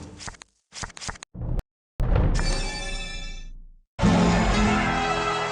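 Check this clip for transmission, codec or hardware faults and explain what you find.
Two faults sit back to back early in the clip. There is a playback stall, and then a time-compressed catch-up.

The playback stall runs from 1.59 to 2.00 s. The sound cuts out in mid-flow and leaves about 0.40 s of silence. The output had nothing to play for that stretch. The likely cause is a player that ran out of buffered data or had its audio thread blocked. Output resumes only once it recovers.

The time-compressed catch-up follows at once, from 2.00 to 2.40 s. The player works off the backlog the stall built up. It drops small slices of audio and cross-fades across the joins. That runs the sound at twice normal speed. Pitch stays where it was, so the passage sounds rushed rather than higher.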